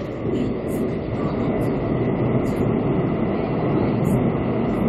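Damaged data in a compressed stream appears twice, from 1.07 to 1.12 s and again from 2.56 to 2.61 s, each lasting about 50 ms. In both places part of the encoded stream has been corrupted, so the decoder misreads the frames there, loses its lock on the frame structure and has to search for the next valid header before normal playback resumes. Each event is heard as a short, harsh chirp or blip cutting into the sound.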